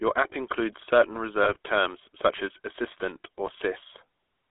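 Speech heard through the GSM full-rate codec: a band of roughly 300 Hz to 3.5 kHz, with a gravelly buzz from pulse-driven excitation, consistent with 13 kbps coding, unlike the smeared warble of lower-rate codecs. GSM bit errors then cause brief squawks and gargling, from 1.44 to 1.57 s after "app includes certain" and from 3.46 to 3.51 s after "such as 'assistant' or". These bursts are corrupted decoder parameters that distort the sound, not silent dropouts.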